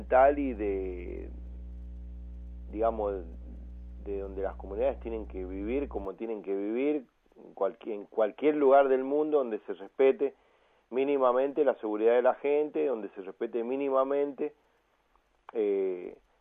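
A steady low 60 Hz tone sits fairly prominently under the sound from 0.0 to 6.05 s. This is mains hum, leaking in from a ground loop or a nearby transformer.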